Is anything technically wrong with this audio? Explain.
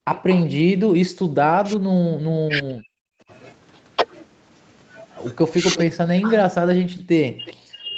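Yes. Echo-canceller faults affect this speech clip.

Background gated by the echo canceller, 0.00 to 0.06 s: while far-end audio played, the canceller clamped the microphone, so the room sound drops by up to about 40 dB for roughly 70 ms before recovering.

Echo leak, 0.14 to 0.44 s and 7.45 to 7.54 s: residual loudspeaker pickup likely slipped past the canceller and was sent back, so a faint copy of the speech trails 364 ms behind, roughly 15 dB down in the first stretch and 20 dB down in the second.

Speech suppressed in double talk, 0.88 to 2.88 s, 3.24 to 3.32 s, 5.60 to 6.38 s and 6.98 s to the end: with both sides talking, the canceller likely mistook the near talker for echo and attenuated it. The speech dips or cuts out in pieces, by roughly 40 dB at worst in the first and last spans and around 25 dB in the other two.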